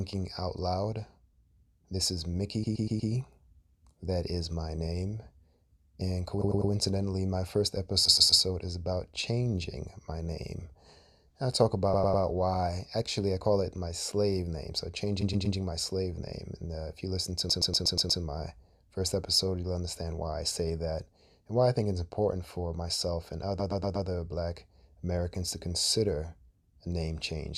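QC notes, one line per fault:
2.63–3.11, 6.41–6.71, 8.05–8.41, 11.93–12.23, 15.21–15.57, 17.49–18.21, 23.59–24.07 s: repeated frames. A 100 or 120 ms block of compressed audio replays three to six extra times, heard as a stutter. Each event adds 0.3 to 0.72 s.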